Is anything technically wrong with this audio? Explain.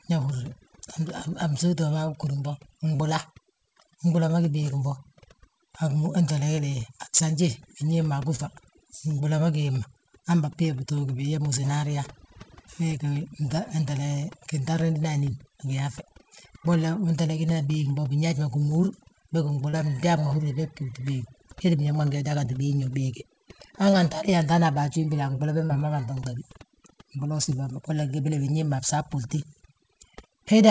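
Yes. Throughout, the background drops and breaks up into twinkling specks. This is overdone noise removal, which suppresses frequency bands near the noise estimate and takes quiet vocal detail with them.

At 2.96, 8.36, 19.70, 23.90, 25.67 and 27.43 s, brief smears or wobbles occur. Each is short concealed packet loss: about 30 ms of audio went missing and was filled by extending the preceding sound.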